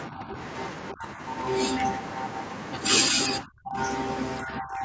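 Speech suppressed in double talk, likely from an echo canceller reacting to far-end speech, dips the speech at 0.08–0.37, 0.91–1.22, 3.10–3.21, 3.43–3.78 s and from 4.42 s to the end. The drops range from slight to near-silent and are deepest at 3.43 s.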